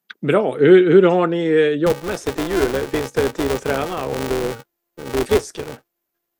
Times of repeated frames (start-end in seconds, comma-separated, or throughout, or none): none